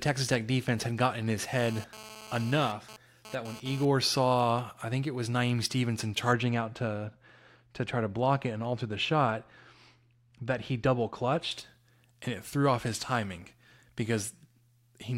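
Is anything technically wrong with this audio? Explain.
Yes. From 1.58 to 3.85 s a GSM phone buzz sits under the speech at about 18 dB below it. A nearby 2G handset sending data transmits bursts about 217 times a second, and the audio circuitry rectifies those radio pulses into a hard, raspy buzz at 217 Hz that has no relation to the speech. Because the phone is transferring data, the buzz cuts in and out rather than holding steady. A spectrogram shows a comb of harmonics stacked at 217 Hz spacing, appearing in patches, and the waveform shows sharp, regularly repeating spikes.

From 6.33 to 11.51 s de-emphasis has been applied wrongly. A treble cut meant to reverse pre-emphasis was used on audio that had none, or was applied a second time. The response tilts smoothly downward toward the top, reaching about 14 dB down at 10 kHz relative to 1 kHz, so the speech turns dull and muffled. On a spectrogram the upper frequencies fade progressively over this stretch, and the waveform looks smoother and rounder.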